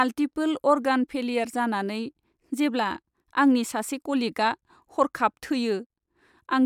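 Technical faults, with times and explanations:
No technical faults can be heard in this speech recording.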